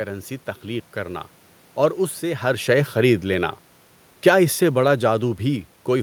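Around 2.5 s the level shifts as the talker moves relative to the microphone, over room noise. From 4.13 s to the end, automatic gain falling: the gain control judged the input too loud, or its background noise too strong, and lowered its gain progressively, so speech and background sink together.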